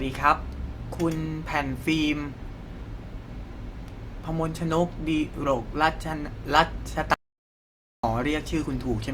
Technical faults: audio dropout to silence

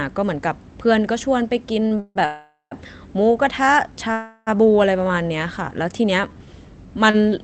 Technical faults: short stall from a late packet; call audio freeze; jitter buffer slow-down

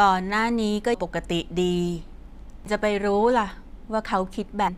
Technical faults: damaged data in a compressed stream

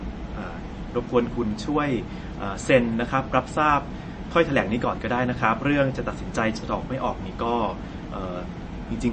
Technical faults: MP3 compression

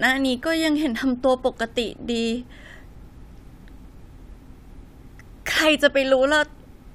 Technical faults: none

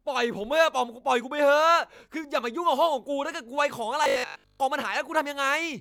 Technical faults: robotic sound from repeated short buffers

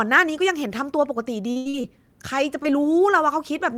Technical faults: repeated packet loss (robotic sound); short concealed packet loss

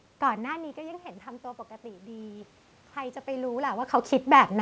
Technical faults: automatic gain rising

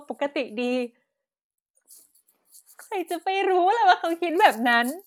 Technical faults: none

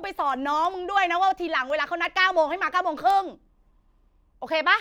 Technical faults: word clock ticks

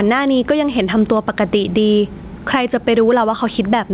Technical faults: gain pumping

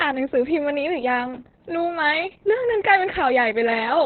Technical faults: Opus voice compression

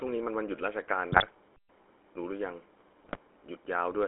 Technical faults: GSM full-rate codec; GSM bit errors

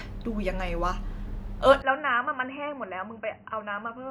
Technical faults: input switched to a poorer device

